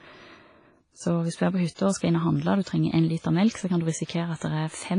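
The whole speech clip carries heavy transform-codec damage, likely from WMA compression at a low bitrate, which fits about 24 kbps. Nothing survives above 10.1 kHz. Quantisation noise smears across long blocks, so the speech sounds ringing and washy. A hiss breathes with the signal.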